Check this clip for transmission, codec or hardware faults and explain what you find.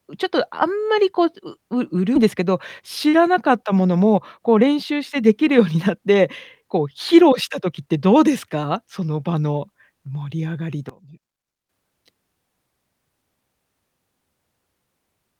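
Three kinds of fault turn up in this speech clip: a skip ahead, two jitter buffer speed-ups, and a short stretch with one channel inverted.

At 2.15 s, a piece of the stream was discarded while later audio was already queued, so playback leapt straight to it with no fill. This skip ahead removes roughly 0.7 s of speech, and the two sides butt together abruptly, leaving an audible jump in the sentence.

From 3.85 to 6.16 s and again from 6.61 to 8.25 s, the jitter buffer had built up more audio than its target and trimmed short pitch-period slices repeatedly to catch up. In this jitter buffer speed-up, the speech runs about 8% fast at unchanged pitch, sounding slightly hurried. Around 0.2 s is lost in the first stretch and about 0.15 s in the second.

From 10.89 to 11.69 s, the sound drops by about 19 dB and turns faint, as though the centre has hollowed out. One channel inverted is the likely cause: the shared content cancels when the channels are summed to mono, leaving only their faint difference.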